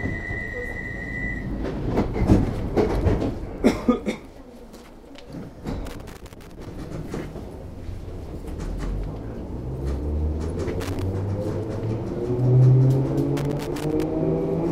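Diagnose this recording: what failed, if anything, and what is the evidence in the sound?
The failure is in the analogue wiring: a loose connector crackle shows up three times. There's an irregular burst of scratchy crackle from 5.85 to 6.67 s, a shorter one from 10.80 to 11.02 s, and another from 13.37 to 14.03 s. That's a worn or dirty contact shifting and intermittently losing connection, so the signal gets chopped on and off. Any DC sitting on the line turns each make-and-break into a pop, which gives the bursts their gritty texture.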